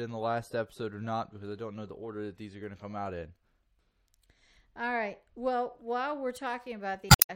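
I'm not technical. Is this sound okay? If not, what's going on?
No. Right at the end of the speech, from 7.07 to 7.30 s, there is a brief glitch, heard as a chirp, squawk, click or short hole. This is damaged data in a compressed stream. Part of the stored file was corrupted, so the player misread that stretch and had to find its place again.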